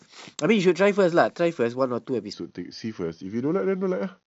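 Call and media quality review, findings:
Section at the wrong speed, 2.33 s to end of clip: speech abruptly drops to 0.85x, pitch falling about three semitones, delivery slowed and deepened. Speed and pitch shift together, consistent with playback against a mismatched clock, likely an editor or player resampling error.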